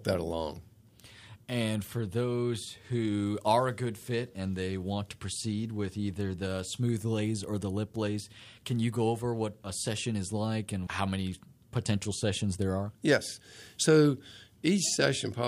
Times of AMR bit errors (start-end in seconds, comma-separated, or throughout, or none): none